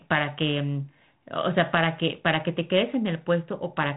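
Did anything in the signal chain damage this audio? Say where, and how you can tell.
No, nothing in this speech stood out on listening as damage from any stage of the chain.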